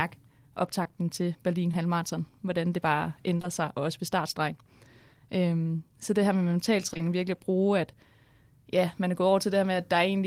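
Speech with short concealed packet loss. Brief smears or wobbles occur at 0.83, 1.71, 3.37, 3.41, 6.89, 6.93 and 6.97 s. Late packets were filled by extending the preceding sound.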